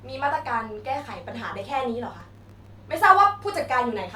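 From 2.20 to 2.69 s the speech breaks into processor overload crackle: the processor repeatedly misses its deadlines for very short buffers, dropping dozens of silent gaps into the speech. On the waveform these show as many tiny flat-line notches; on a spectrogram, as thin full-band vertical streaks.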